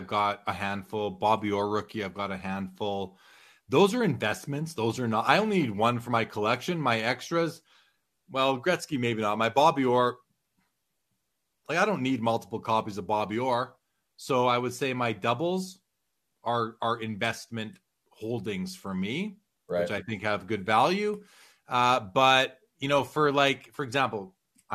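Listening through the recording, nothing stood out as a technical problem at any point.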